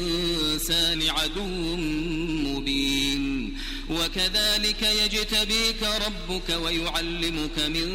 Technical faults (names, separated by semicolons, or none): drift correction step